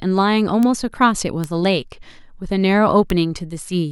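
A single flipped bit in a stored or transmitted sample throws that value up by a power of two before it snaps back, a bit error spike, at 0.63, 1.44 and 3.10 s. Each is one sample reaching about -4 dBFS, heard as a sharp, broadband tick unrelated to the speech.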